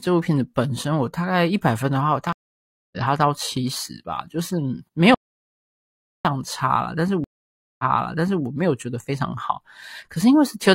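At 2.33 s the speech stops for about 0.60 s in a stream reconnect: the connection broke, the player sat silent, then restarted decoding mid-stream. By 2.97 s it resumes roughly 0.4 s further on, so material is skipped, not just paused.

From 5.15 s to 6.25 s, an audio dropout to silence cuts about 1.10 s of speech, most likely from lost input. The gap is silent with no room tone, and the speech resumes without any jump or repeat.

At 7.24 s a second stream reconnect brings about 0.55 s of silence. When the sound returns, it restarts 0.65 s earlier, so a stretch is heard twice before playback runs clear again at 8.44 s. This repeat, like the earlier jump, marks it as a reconnect.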